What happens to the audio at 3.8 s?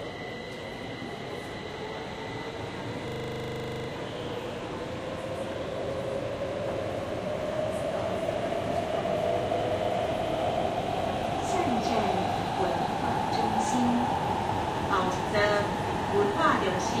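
A system hang loop runs from 3.08 s to 3.88 s. The playback side froze while the sound hardware kept recycling one 40 ms slice of its buffer, so that fragment repeats exactly 20 times at 25 Hz and produces a rough, rattling buzz. A waveform shows an identical 40 ms shape repeated like a stamp, and a spectrogram shows a frozen, vertically striped block with regular 25 Hz banding.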